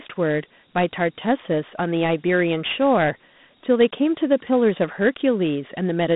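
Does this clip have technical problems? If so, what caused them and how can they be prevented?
Yes. Throughout the speech, the sound shows Dialogic VOX ADPCM damage. The audio sits in a phone-line band of roughly 150 Hz to 3.7 kHz, with nothing above 3.8 kHz. A plainly audible gritty hiss rides along with the speech. The coder stores each sample as only a 4-bit step from a predicted value, which fits a 32 kbps rate at 8,000 samples a second. Its rounding errors ride along as noise. Plain G.711 telephone audio has the same narrow band but lacks this grit. To prevent it, record or export at full bandwidth as 16-bit PCM, and keep VOX files only for final playback on the phone system.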